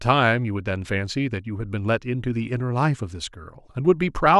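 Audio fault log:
No fault is heard anywhere in this speech clip. There is nothing to log against any time.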